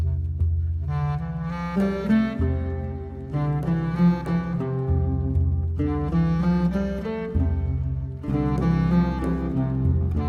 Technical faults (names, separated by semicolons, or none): none